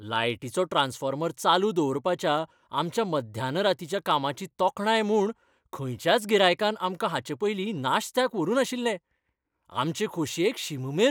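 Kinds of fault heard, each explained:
Clock slip clicks: A soft, fast rattle runs under the speech from about 0.12 s to the end, with ticks roughly every 20 ms. That rate points to two likely free-running clocks that disagree by around a tenth of a percent, so a single sample is dropped or repeated at each slip. On a spectrogram this appears as evenly spaced, faint vertical broadband lines. Zoomed into the waveform, each slip is a tiny one-sample step.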